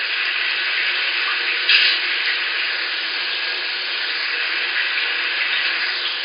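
Nothing goes wrong anywhere in these everyday sounds, so there's no technical fault to point to.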